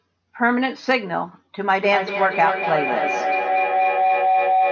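A speech recording in which, from 1.71 s to the end at 4.71 s, a tone near 700 Hz swells and pulses roughly every fifth of a second, climbing to about the same level as the speech. This is feedback howl: two devices on one call in the same room keep recirculating sound, gaining level on each pass. The call's microphone processing stops everything above 8 kHz.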